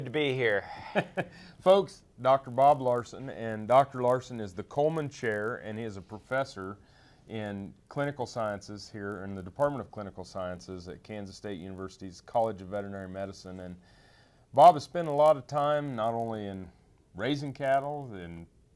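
From start to end, the audio carries a resampler restarted on every block. The conversion from 48 kHz to 24 kHz was run on each 20 ms block in isolation, so every block edge gets a small error. At 50 per second these ticks merge into a buzz present only while there is signal. A spectrogram shows faint vertical lines every 20 ms, with harmonics stacked at 50 Hz spacing, and the waveform shows tiny discontinuities at matching intervals.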